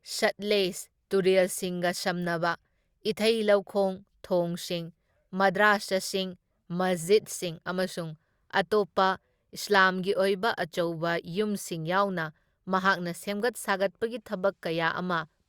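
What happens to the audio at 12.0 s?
Nothing goes wrong at 12.0 s; the speech there plays through cleanly, with no dropout, click, distortion or other audible fault.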